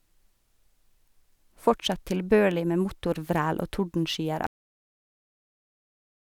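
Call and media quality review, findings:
Cut-off end at 4.47 s. Speech stops mid-sound and drops straight to digital silence, with no decay, for the rest of the clip. Probable component: recording/playback buffer handling at stream close. Mechanism: the final buffers were never written or played out, so the signal is truncated, not faded.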